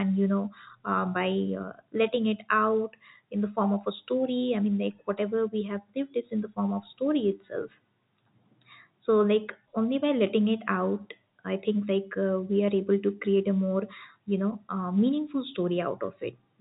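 No faults found in the speech; the G.711 A-law telephone coding passes nothing above 3.8 kHz and adds only a faint, level-following quantisation noise.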